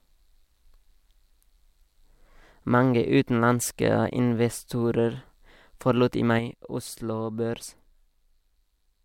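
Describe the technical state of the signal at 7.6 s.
At 7.6 s the speech sits about 6 dB lower than before 6.39 s, a drop that starts abruptly right after "forlot i" and lasts to the end of the clip. The likely cause is one channel drops out: with one stereo side lost, the mono sum carries only half the shared signal.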